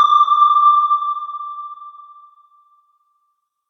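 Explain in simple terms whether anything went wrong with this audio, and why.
Nothing went wrong; these sounds show no faults.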